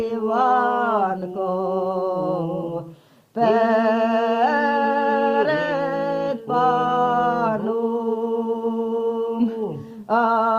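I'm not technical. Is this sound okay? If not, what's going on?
Yes, this sound is okay, and there's nothing going on that needs fixing.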